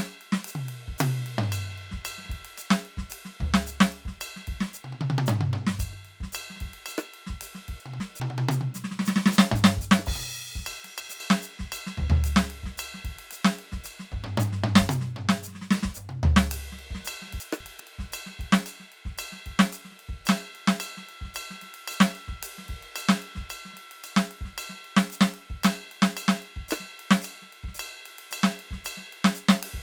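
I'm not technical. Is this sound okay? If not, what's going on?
No. The music has chunks out of order three times: 7.8 to 8.2 s, 10.8 to 11.2 s and 17.4 to 17.8 s. Each time, a 200 ms piece plays one slot late, so the passage briefly jumbles.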